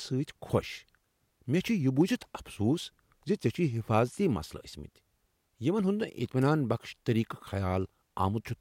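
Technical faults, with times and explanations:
2.01 s and 6.42 s, electrical switching spike: two sharp little snaps sit on top of the speech, each gone in about a hundredth of a second. They're fairly quiet, peaking at roughly -35 dBFS for the first and -30 dBFS for the second. The likely culprit is a nearby switch, motor or static discharge throwing a brief arc that the audio line picked up as a click.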